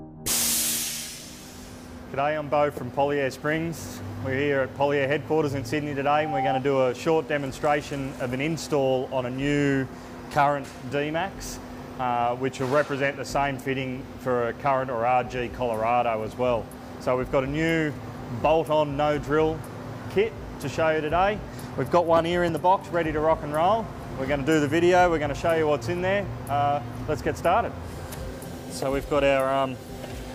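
From 6.05 to 6.62 s a loudspeaker feedback squeal breaks out. A single tone at 781 Hz swells over roughly a third of a second until it sits at about the same level as the rest of the sound, then stops. The microphone was picking up the loudspeaker it was feeding, and at 781 Hz the gain around that loop exceeded one. The frequency fed on itself and grew into a steady whistle until it stopped.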